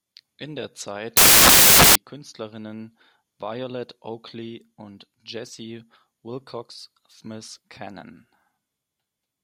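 A speech clip in which, from 1.17 to 1.95 s, the audio turns into loud, harsh broadband noise: samples built from the wrong bytes. For that stretch the reader assembles each sample from mismatched bytes, through an offset, swapped byte order or wrong alignment, so the rapidly varying low bits land in the most significant positions. Unlike an added noise burst, which sits on top of audible speech, here the speech itself is replaced.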